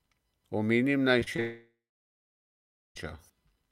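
Short concealed packet loss occurs three times in quick succession: at 1.19 to 1.24 s, 1.24 to 1.28 s and 1.36 to 1.40 s. Each time about 20 ms of the speech failed to reach the decoder, and the receiver patched the gap by carrying the preceding sound forward before blending back into real audio. The result is a brief smeared, warbling texture around 1.2 to 1.4 s.

Long network dropout follows, from 1.40 to 2.97 s, about 1.56 s of speech never played. The last sound is stretched into a fading buzz or hiss that gives way to roughly 1.2 s of silence, and the speech then resumes further on with that stretch simply missing. The cluster of short losses just before it suggests the connection was likely degrading and then stopped delivering audio altogether.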